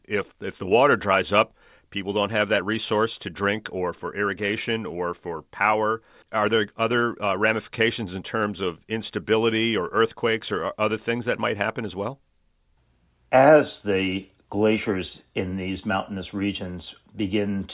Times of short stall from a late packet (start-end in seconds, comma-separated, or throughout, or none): none